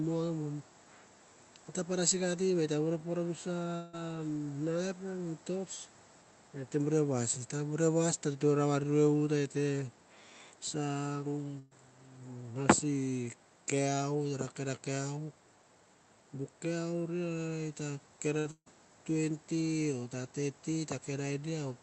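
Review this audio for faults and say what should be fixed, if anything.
At 3.75 to 3.95 s there's a roughly 180 ms gap where the last sound gets stretched into a fading buzz or hiss, and then the audio picks up further along. That's likely a long network dropout: nothing arrived, so the receiver just papered over the hole. A bigger jitter buffer or a steadier network link should keep this from happening.

There's a burst of packet loss at 11.59 to 11.73 s, about 120 ms, and two more close together at 18.39 to 18.47 s (60 ms) and 18.51 to 18.68 s (160 ms). In each one the receiver holds the last sound and fades it, and the final gap fades to silence for about its last 70 ms before the audio jumps ahead. Turning on Opus in-band FEC, plus a bit more jitter-buffer headroom, would recover most of these.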